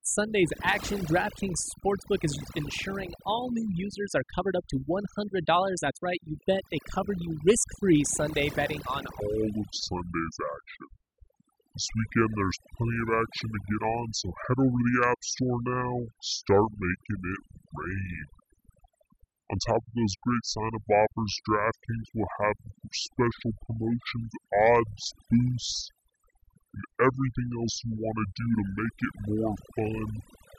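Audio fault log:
throughout: overdone noise removal. Pauses fall to near silence, flecked with isolated twinkling specks. The speech's quieter bands were removed along with the noise. A spectrogram shows a blank, speckled floor and ragged, gappy harmonics.
9.20–30.59 s: section at the wrong speed. Starting right after "betting on", playback runs at 0.644 times normal, so the speech becomes slow and deep, roughly seven semitones lower. The likely cause is audio clocked at the wrong rate. Harmonics crowd downward on a spectrogram, and the waveform stretches out.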